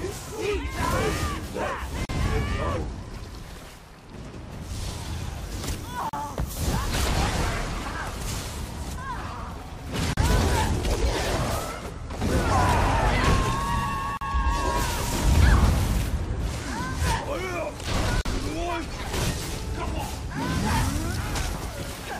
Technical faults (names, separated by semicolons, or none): gap at a join of encoded pieces